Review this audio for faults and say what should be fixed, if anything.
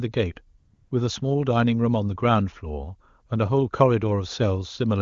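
From 0.59 to 0.91 s the real background gives way to a smooth, steady hiss that switches in and out. This is AMR comfort noise: the phone stopped sending speech frames for 320 ms, and the receiver synthesised filler noise from a rough level-and-spectrum description. To prevent it, disable discontinuous transmission or tune the voice activity detector so it does not cut brief pauses.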